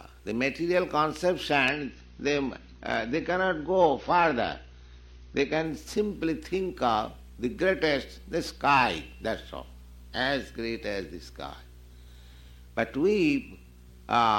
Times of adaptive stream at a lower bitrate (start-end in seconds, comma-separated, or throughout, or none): 1.65-5.65